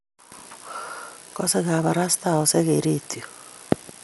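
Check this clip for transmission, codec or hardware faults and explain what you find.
One codec fault runs through the whole speech clip. From start to finish the audio is dull, with nothing above 11.4 kHz and a rough, fluttering noise around tonal parts. The cause is likely Dolby Digital compression at a low bitrate, which fits about 64 kbps. Its encoder narrows the band and gives many frequency lines no precision, and the decoder fills them with dither noise. That added roughness is what separates it from a plain low-pass filter.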